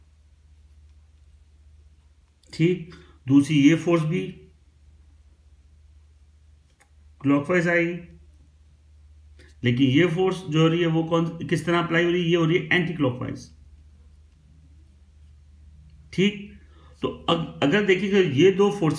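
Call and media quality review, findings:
Nothing stood out on listening to this recording.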